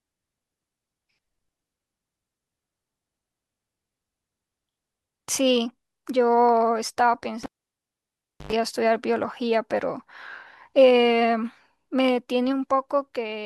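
Cable pulled and plugged in, 7.43–8.53 s: a spike-like pop, a 1.04 s near-silent gap, 0.1 s of 50 Hz buzz as horizontal harmonic stripes, then a return pop.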